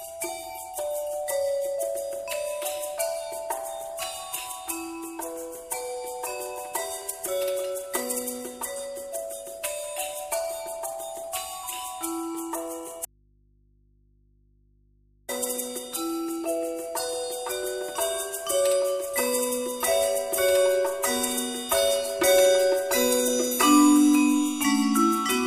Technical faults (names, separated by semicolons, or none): audio dropout to a faint residue